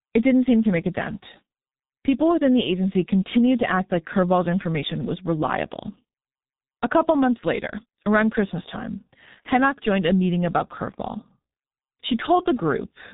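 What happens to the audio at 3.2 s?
At 3.2 s the speech carries G.723.1 codec damage, present throughout the clip rather than just at that moment. The damage is heavy, and the thin, coarse sound fits a bitrate of about 6.3 kbit/s. The codec works in 30 ms frames and updates its voice model slowly. Nothing passes above 3.8 kHz. The speech sounds muffled and hoarse. Consonants are blurred and lose their edges.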